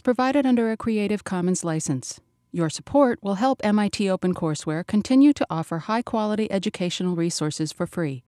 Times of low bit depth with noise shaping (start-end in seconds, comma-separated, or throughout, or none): none